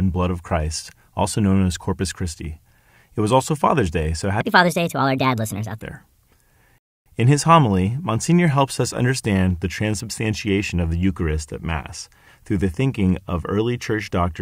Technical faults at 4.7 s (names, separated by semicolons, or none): section at the wrong speed